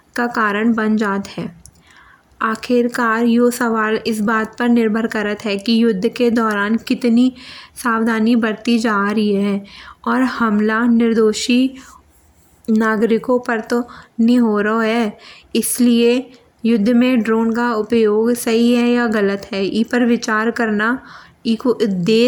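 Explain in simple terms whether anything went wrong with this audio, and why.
Nothing went wrong with this recording of speech. No technical faults turn up anywhere in it.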